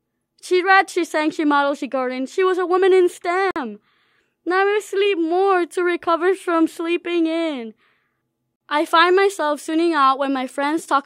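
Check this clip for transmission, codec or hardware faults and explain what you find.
The speech has one fault, heard twice. At 3.51 s, right after "was a woman in", and at 8.56 s, just before "I find myself tuning", the sound drops into a 50 ms hole. This is a gap between chunks: the audio was delivered in 5-second blocks, silence was inserted at each join, and nothing was lost.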